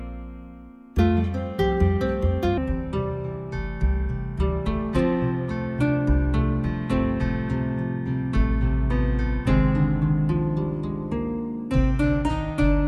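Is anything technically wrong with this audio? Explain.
Yes. From 2.58 s to the end, a section plays at the wrong speed. It runs at 0.75 times the original rate, likely because it was played against a mismatched clock. Pitch drops with the tempo, so the sound turns slow and deep, roughly five semitones lower.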